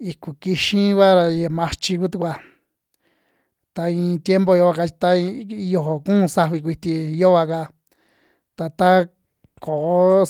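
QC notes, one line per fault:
No faults heard in this speech recording.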